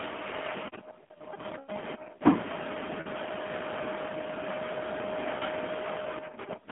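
Throughout, the speech carries AMR narrowband mobile codec damage. It rebuilds sound from a vocal-tract model driven by sparse pulses, and a low mode, which fits about 7.4 kbps, makes it plainly buzzy and synthetic. A spectrogram shows energy only between 200 Hz and 3.5 kHz.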